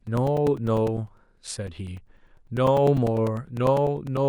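Speech with periodic USB or driver dropouts from 0.07 s to 4.17 s: every 0.1 s a gap of a few milliseconds is filled with silence, around forty regular ticks. Unlike random crackle, they are evenly spaced and only sound while there is signal.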